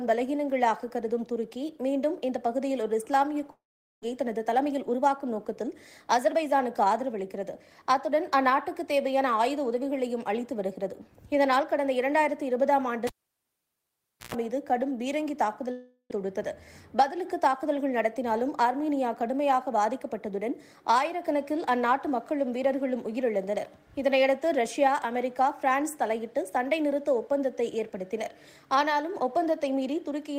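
At 3.51 to 4.04 s and 15.71 to 16.12 s the sound is continued as a fading buzz or hiss, then drops to silence, and about 0.3 s of audio never returns, likely a long network dropout. Jitter buffer speed-up follows at 4.12 to 7.71 s, 16.95 to 17.63 s and 18.15 to 18.66 s: short pitch-period pieces are cut, so the audio runs 6 to 7 percent fast at unchanged pitch. From 13.07 to 14.35 s a cable pulled and plugged in gives a pop, about 1.2 s of near silence, a 0.12 s burst of 60 Hz mains buzz, then a second pop.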